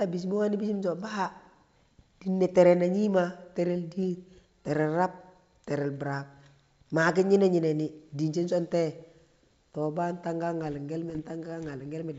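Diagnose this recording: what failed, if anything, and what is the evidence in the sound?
The trouble is bit errors on an ADPCM link, somewhere in the transmission path. From 11.10 to 11.21 s the G.722 speech breaks into pops and a rough, uneven burst. Flipped bits throw off the decoder's step size and predictor, so the damage rings on, consistent with an error rate of around half a percent.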